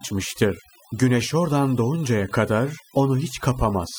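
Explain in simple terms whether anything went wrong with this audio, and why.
From start to finish, the gaps between phrases fall to an unnatural near-silence with twinkling specks. This is overdone noise removal. A noise-cleaning tool was turned up too far on a noisy recording. It shut down narrow slices of the sound whenever they resembled the background noise, so the softer parts of the voice were stripped away along with the noise.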